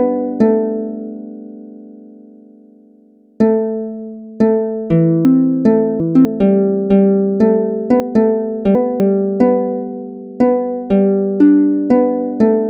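Chunks out of order occur twice, at 5.25 to 6.25 s and at 8.0 to 9.0 s. In each span a 250 ms chunk arrived late and plays three chunks after its proper place. Nothing is lost, but the sound briefly jumbles, with three hard joins.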